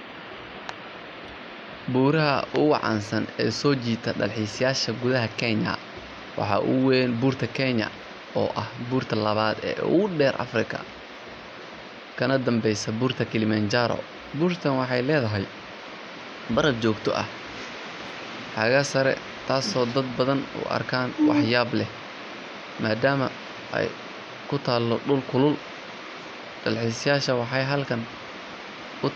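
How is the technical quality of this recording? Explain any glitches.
No glitches or technical faults can be heard here.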